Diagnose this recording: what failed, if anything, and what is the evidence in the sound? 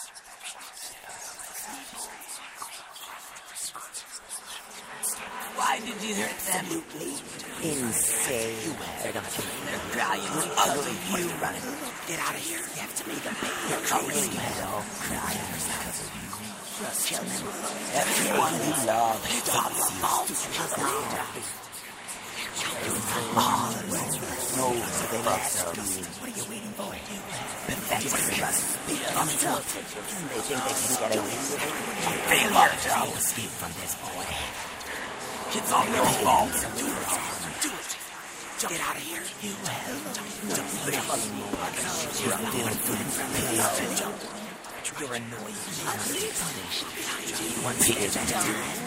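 Nothing failed in this recording of everyday sounds, and there is no evidence in the sound of any stage going wrong.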